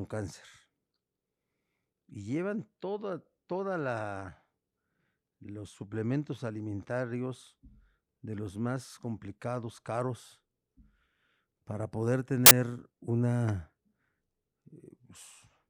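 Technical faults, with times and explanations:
12.46 to 12.51 s, file tags played as audio: a burst of very loud white noise lasts about 50 ms, with hard edges at both ends. A block of embedded data, here a compressed cover picture, was read as if it were samples. Compressed image data has almost no structure, so its bytes behave like random values. They swing across the whole range and form broadband static. The edges are abrupt because the data starts and stops without any fade.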